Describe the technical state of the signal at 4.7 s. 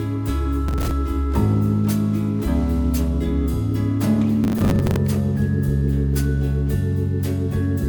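At 4.7 s the signal is in the middle of a processor overload crackle that runs from 4.44 to 4.96 s. The processor cannot finish its small buffers on time, which fits buffers of around 10 ms. About twenty deadlines are missed over this stretch. Each miss replays a scrap of old audio with hard edges. Strung together, these repeats give a gritty, tearing crackle riding on the sound until the load clears.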